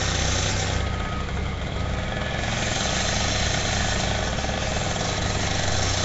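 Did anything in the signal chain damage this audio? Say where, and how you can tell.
Yes, at the codec stage. The audio carries Nellymoser compression damage throughout, most likely from Nellymoser Asao at around 32 kbps. Nothing survives above 7.7 kHz. Quiet bands come back as hiss, which leaves a rough, smeared haze around the sound.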